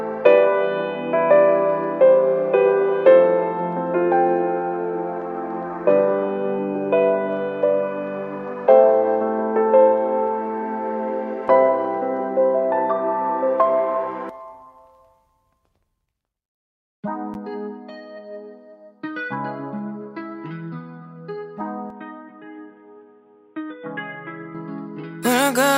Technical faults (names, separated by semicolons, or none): input switched to a poorer device